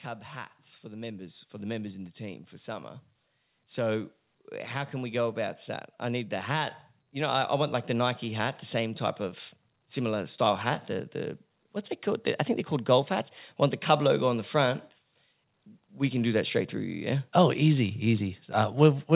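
From 0.05 to 2.99 s and again from 4.91 to 11.42 s, automatic gain rising lifts the level by about 5 dB, then about 9 dB. Speech and background noise swell together over seconds, unlike a talker simply speaking louder.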